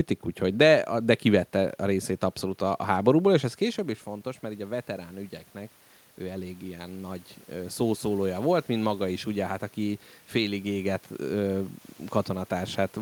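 Just after "a háborúból és ez", at about 3.5 s, the talker moves away and the level falls by about 14 dB. From 3.75 s to 11.74 s automatic gain rising follows: the gain control slowly adds about 10 dB, so voice and room noise swell together.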